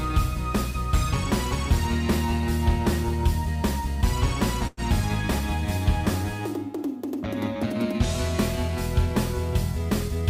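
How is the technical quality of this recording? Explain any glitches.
The recording has two glitches, both from the way the audio travelled across a network.

A call audio freeze occurs from 4.67 to 4.80 s. The sound briefly stalls. The last bit of audio is stretched into a short, fading buzz or hiss lasting about 104 ms. The likely cause is delayed packets that left the jitter buffer empty. The receiver filled the wait with this artificial tail. When the packets arrived, playback resumed where it had stopped. Nothing is lost, but everything after runs about 104 ms later.

A jitter buffer speed-up runs from 9.79 to 10.23 s. Here the audio plays at 109 percent of normal speed. The pitch does not change. The receiver had more buffered audio than it wanted, so it trimmed many tiny slices, each one or a few pitch periods long. Together they add up to roughly a twentieth of a second. The result sounds rushed, as if the timing briefly hurries.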